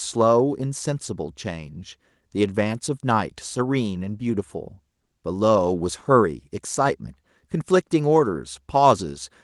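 No technical faults are audible.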